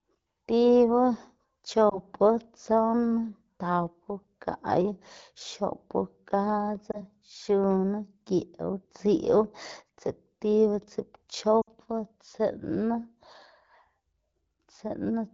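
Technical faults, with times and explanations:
1.89–2.00 s, 6.91–7.02 s and 11.61–11.69 s, lost AMR speech frames: radio errors corrupted frames, so the AMR-WB decoder, running cleanly at 12.65 kbit/s, repeated the last good pitch and vocal tract settings at falling gain. The first two are brief dips or warbles, each fitting one lost 20 ms frame. The third is a longer fade, fitting about three lost frames, before the sound returns.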